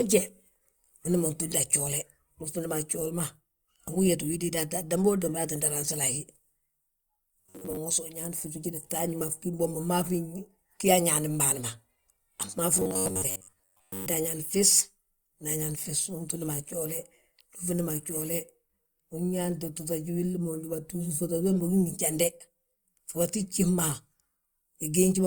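From 7.40 to 7.77 s and again from 12.74 to 14.06 s, the speech turns into a rigid, metallic buzz at 93.8 Hz. This robotic sound likely comes from repeated short buffers: a roughly 11 ms slice loops for most of each stretch while the real audio is skipped.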